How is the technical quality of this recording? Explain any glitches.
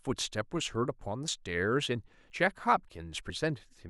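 The recording has three short skips in the speech. Dropped buffer (overrun) at 1.28 s, 2.30 s and 3.30 s: the likely cause is that the software fell behind, so the hardware overwrote a block of samples before it was read, and the sound either side was spliced together with no gap. Each is heard as the speech jumping ahead, by a few tens of milliseconds at 1.28 s and 3.30 s and roughly half that at 2.30 s.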